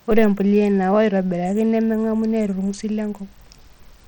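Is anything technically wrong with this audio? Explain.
Yes. Throughout the speech, the sound carries plainly audible coding damage, most likely from Bluetooth SBC compression. SBC splits the signal into a few broad sub-bands and hands out bits by a simple rule rather than a hearing model. Here the budget is tight, consistent with a bitrate near 80 kbps, so the bands are coarsely quantised. That leaves a gritty, grainy texture riding on the speech, and the spectrum stops at about 19 kHz.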